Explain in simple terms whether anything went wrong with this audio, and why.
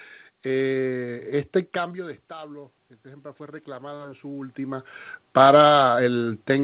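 Yes, something went wrong: automatic gain rising, from about 1.96 s to 4.95 s. Just before this the voice became much quieter at the microphone, as if the talker had leaned back. The system then slowly turned its own volume up over about three seconds. Unlike a talker simply coming closer, the room's background noise swells up together with the voice, which shows the boost came from the equipment rather than from anyone moving.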